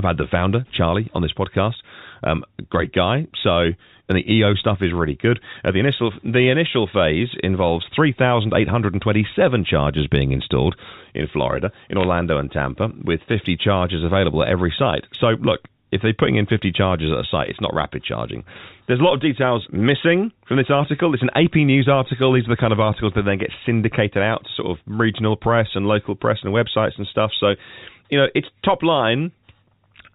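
At about 12.01 to 12.06 s there's a short burst of bit errors on a digital phone line. For about 50 ms the speech picks up a quick spatter of sharp ticks. On a G.711 stream each flipped bit corrupts a single sample, and when it lands on the sign bit of a loud sample or on a high-order bit that sample jumps well away from its true value, giving a click. The density sounds like roughly 0.2 percent of bits, spread across a handful of frames. The speech itself carries through underneath, still capped at 4 kHz by the telephone coding.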